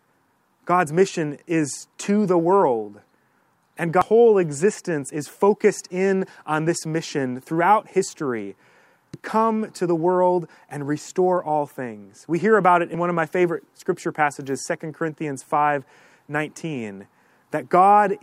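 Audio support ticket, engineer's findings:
Damaged data in a compressed stream, speech, two brief glitches at 4.02–4.05 s and 9.14–9.17 s, about 30 ms each. Decoder misreads corrupt frames and resyncs.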